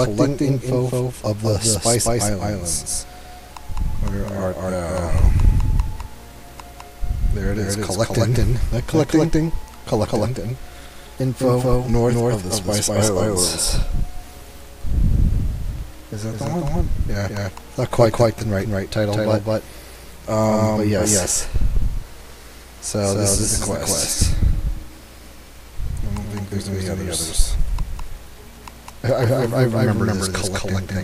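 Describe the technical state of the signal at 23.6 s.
At 23.6 s every sound is followed by an exact second copy about a fifth of a second later, at roughly the same level, with no decay or room colour. This is a doubled audio track, present throughout the clip, likely from the signal being captured twice through paths of different latency.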